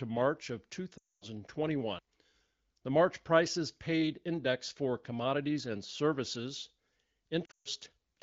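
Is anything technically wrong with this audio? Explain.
Yes, there are lost AMR speech frames at 0.97–1.24 s and 7.45–7.68 s. The decoder stretches the last good frame and fades it, so the speech smears, then drops out briefly.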